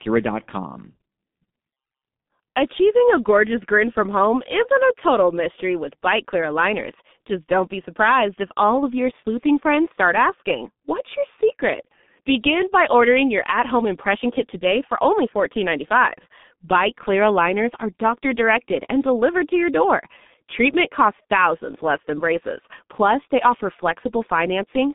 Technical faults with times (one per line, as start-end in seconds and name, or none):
0.00-24.94 G.723.1 codec